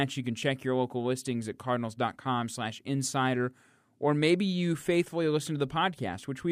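A short speech recording with nothing technically wrong to point to at any moment.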